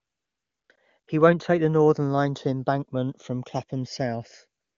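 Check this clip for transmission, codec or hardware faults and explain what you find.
Two faults are present in this speech clip.

Channels drifting apart runs throughout. The two channels run on slightly different clocks, roughly 100 ppm apart. Their offset creeps toward half a millisecond, so mono sums flange slowly.

AMR comfort noise appears at 0.00 to 0.69 s, 0.75 to 0.77 s, 0.99 to 1.07 s, and 4.61 s to the end. The phone stopped sending speech frames. Smooth synthetic noise replaces the real background and switches in and out. The clear AMR wideband speech elsewhere shows that the codec itself is working normally.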